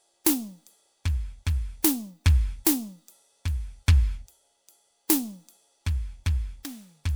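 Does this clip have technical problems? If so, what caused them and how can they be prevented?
No, this music clip has no audible technical faults, so there is nothing to trace back to a cause or prevent.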